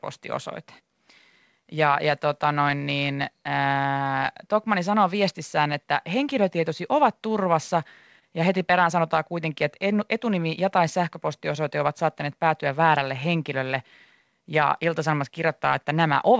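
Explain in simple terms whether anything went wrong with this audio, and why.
Something did go wrong in timing. There is clock drift between sender and receiver: the sending device's audio clock runs about 1% slower than the receiving one. The receiver's waiting buffer therefore keeps running low, because sound arrives a little more slowly than it is played out. The result is a slight, steady unevenness in how the speech moves along, rather than one obvious break.

To keep up, the receiver makes repeated timing corrections from 0.64 s to 15.70 s. It stretches the audio by repeating tiny slices, so playback runs at about 99% speed, and roughly 150 ms in total gets added across the clip. Each stretch is very small and unevenly spaced, so at most you notice a faintly unsteady pace or a small hiccup in the flow.

There are also scattered short gaps between 4.13 s and 14.23 s, about seven of them. 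Pieces of the signal arrived too late or not at all, and each hole, the longest around 30 ms, was patched by extending the sound just before it. Roughly 70 ms is covered this way, so the speech stays clear apart from brief ticks or smeared moments. Separately, because the audio travelled through a call codec, it contains nothing above 8 kHz, which is normal for this kind of connection.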